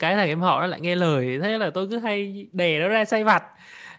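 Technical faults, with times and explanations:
No faults; only ordinary call microphone processing is heard.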